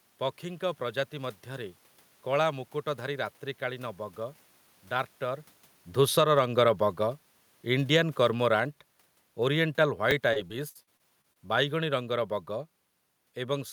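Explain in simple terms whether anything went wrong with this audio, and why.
Four faults can be heard in this speech. From 4.91 to 12.3 s, automatic gain falling: the level control decides the input is too loud and slowly turns everything down, voice and background together. Between 6.28 and 6.81 s there is a brief automatic gain rising, where the control briefly lifts the level again. Separately, near 5.5 s the talker shifts relative to the microphone, which is natural. At 10.11 s a repeated buffer occurs: new audio arrives late, so the previous 10 ms slice plays twice, giving a tiny click or brief buzz. From 10.33 to 11.38 s, repeated packet loss (robotic sound) sets in. Pieces of audio keep going missing, each patched by stretching the previous sound, so the voice turns choppy, with gaps up to 59 ms and about a fifth of that stretch filled in.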